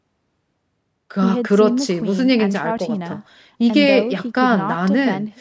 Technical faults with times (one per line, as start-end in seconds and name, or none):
none